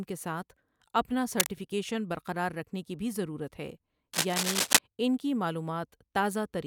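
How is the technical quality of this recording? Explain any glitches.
Two bursts of cable scratch noise cut into this speech clip. The first runs from 1.32 to 1.51 s, between "کے ساتھ اپنا" and "برقرار رکھنے کی بھی", at about the same loudness as the speech. The second runs from 4.13 to 4.79 s, after "کی بھی ضرورت ہے" and before "ان کی", and is a little louder than the speech. Both sound like scratchy rustling, most likely from a worn cable or connector being moved, with its contact resistance fluctuating rapidly. On a spectrogram they appear as ragged broadband smears. On the waveform they appear as dense, irregular spiky patches.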